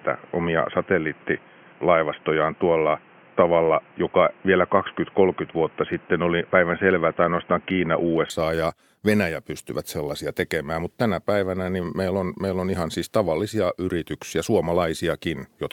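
Input switched to a poorer device, 0.0 to 8.3 s, likely a different microphone or headset: nothing above 3.2 kHz, so speech sounds dull and boxy with faint added noise, then clears without a gap, shifting level by a few decibels.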